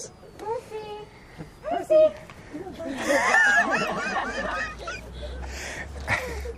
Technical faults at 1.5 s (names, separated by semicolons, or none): switching supply whistle